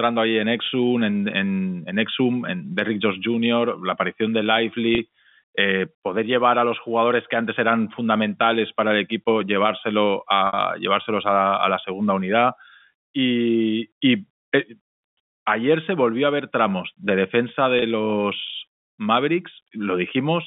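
Speech over a telephone-band line, with packet loss with pitch repetition at 4.95–4.98 s after "la aparición de", 10.47–10.53 s after "para el equipo llevárselo", and 17.79–17.82 s after "ver tramos de defensa". The receiver repeats the last pitch period across each 30 to 60 ms gap, giving a brief held, buzzy sound at the two 30 ms gaps, while the 60 ms one fades into silence before the speech returns.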